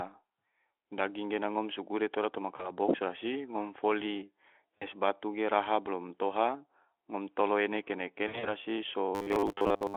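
At 2.55 s and 4.78 s, about 40 ms of speech packets went missing and the speech codec concealed the gaps; the sound smears into a fading buzzy tone or coloured noise. At 8.27 to 8.49 s, the VoIP packet loss concealed by the speech codec is heavier: about 120 ms is lost across 160 ms, with runs up to 60 ms, so the speech stays weak or distorted. From 9.15 s to the end, the output likely keeps looping a 10 ms buffer over most of the audio, which is robotic sound from repeated short buffers. It becomes a rigid metallic buzz at 100 Hz under the Speex telephone-band sound.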